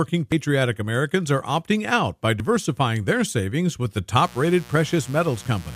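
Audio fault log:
0.32 s and 2.4 s, dropped buffer (overrun): at each point the speech jumps forward rather than leaving a gap, the second one right after "are opting out by". Roughly 40 ms of sound is missing each time, likely because the recording software fell behind and the hardware wrote over samples that had not yet been read. On the waveform the two sides meet at a sudden step with no silence between them, and the spectrogram shows a thin vertical broadband line where the speech is spliced.
4.18 s to 5.75 s, mains buzz: starting just after "their savings with the", a steady, raspy buzz runs to the end of the clip at about 20 dB below the speech. Its fundamental is 60 Hz, and sharp switching spikes arrive twice per mains cycle, so the harmonics are strong and reach up to several kHz. A spectrogram shows a dense comb of evenly spaced horizontal lines, 60 Hz apart, starting at 4.18 s. 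Zoomed in, the waveform shows a repeating spiky pattern at 120 Hz beneath the speech.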